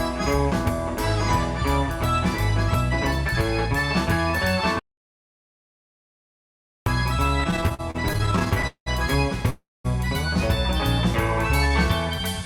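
At 4.79 s the sound cuts out mid-flow until 6.86 s, an audio dropout to silence lasting about 2.07 s. The input was likely lost while the recorder kept writing zeros. The waveform goes flat, and the spectrogram shows a solid blank band with no room tone, so that stretch of audio is gone.

From 7.27 to 8.88 s there are repeated stalls (stutter). The jitter buffer ran dry 25 times, and the receiver stretched the last sound to fill about 508 ms, the longest hold being 191 ms. Nothing is lost, but about a third of the span is filler, so it drags and judders. A spectrogram shows smeared, repeated slices.

At 9.50 s a call audio freeze holds for about 0.36 s. Packets were likely held up in transit, so the receiver extended the last sound as a fading buzz or hiss that drops to silence for about 230 ms. Playback then resumes where it stopped, now about 343 ms later. The waveform tapers into a flat gap.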